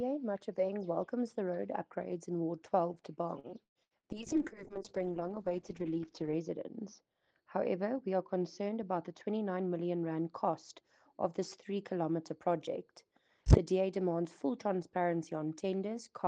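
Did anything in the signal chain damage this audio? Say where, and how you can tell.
Yes. From 3.39 to 4.06 s the sound turns choppy and robotic, with four short holes, the longest about 113 ms. This is repeated packet loss at the network stage. Packets failed to arrive in time over and over, and the receiver kept stretching the last good audio to cover each hole. Around 41 percent of that stretch is concealment rather than real signal.

Just after that, from 4.14 to 12.45 s, the audio goes rough, watery and dull. The top end disappears as the bandwidth narrows from 12 kHz to 8 kHz. This is a call bitrate drop in the codec stage. The sender's bandwidth estimate fell, and Opus was pushed from 32 kbps down to 7 kbps. It held that lowest rate for about 2.2 s, coding more coarsely and trimming the highs until the rate climbed back.

Between 9.28 and 9.58 s the sound briefly hurries, running at about 110 percent speed with no change in pitch. 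That is a jitter buffer speed-up at the buffer stage. The buffer had built up more delay than its target, so it cut short pitch-period slices out of the audio, about 40 ms in total, to catch up.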